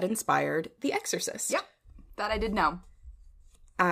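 Nothing here stands out as a technical fault; the speech carries on without any audible glitch or interruption.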